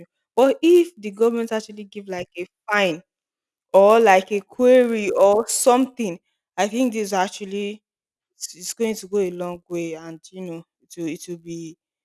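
A faint, steady buzz at 100 Hz rides on the speech from start to finish, sounding only while someone is talking. This is the resampler restarted on every block: each 10 ms block was converted from 48 kHz to 24 kHz in isolation, leaving a small error at every block edge.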